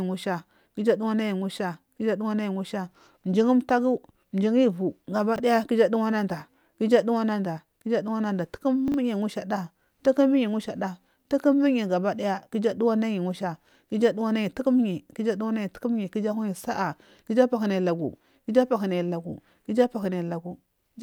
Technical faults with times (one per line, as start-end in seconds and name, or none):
5.36-5.40 chunks out of order
8.88-8.94 chunks out of order